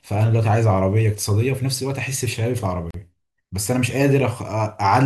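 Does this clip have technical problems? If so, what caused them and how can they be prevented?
Yes. At 2.91 s the speech drops into a silent gap at a join of encoded pieces, lasting about 38 ms until 2.94 s, with its edges smeared by the codec before the sound resumes where it stopped. This happens when separately encoded segments, here apparently cut every 6 s, are concatenated untrimmed, so each encoder's start-up delay and last-frame padding remain. Prevent it by encoding continuously or trimming encoder delay and padding at every join.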